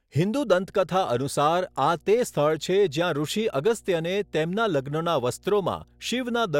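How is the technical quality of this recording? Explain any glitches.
The recording has one clear technical fault: mains hum throughout the speech.

From 0.34 s to the end of the clip there is a steady low tone at 60 Hz sitting under the speech, roughly 35 dB below it. This is mains hum, where the power-line frequency leaks into the signal path, typically through a ground loop between connected equipment or magnetic coupling from a nearby transformer. It is quiet relative to the speech but constant, so it is most audible in pauses.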